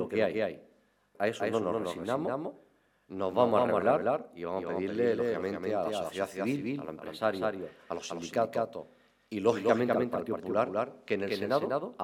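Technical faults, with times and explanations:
Throughout: doubled audio track. Every sound is followed by a second full-band copy about 200 ms later and roughly 5 dB quieter. The copy has no decay or room colour, so it sounds like a flat slapback. It likely comes from a slower second capture path or an edit holding two copies out of step.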